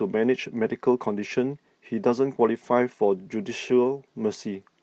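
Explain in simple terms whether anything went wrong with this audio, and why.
Yes, there's one glitch: at 2.63 to 2.69 s, a lost packet rebuilt from error correction sounds briefly rough and noisy, a stand-in copy patching what sounds like a couple of dropped packets.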